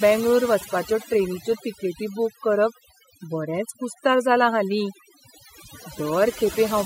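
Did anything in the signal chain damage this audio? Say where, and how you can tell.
Yes. Throughout the speech, the background between phrases drops away, dotted with twinkling, chirpy specks. That is overdone noise removal, a processing-stage fault: a noise reduction stage set too aggressively. It pushes down or mutes individual frequency bands wherever their level sits close to its noise estimate, so isolated leftover bands flicker as tonal specks and the quieter components of the voice are stripped away too.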